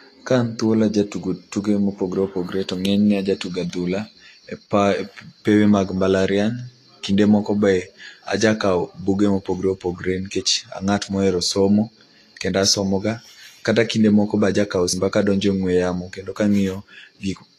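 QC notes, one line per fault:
Throughout: Vorbis compression. The top end stops dead around 14.2 kHz, and the treble under that turns hissy and grainy, with softened consonant attacks. It's likely a low-bitrate Vorbis encode, roughly 33 kbps judging by the damage, replacing fine detail with coarse noise.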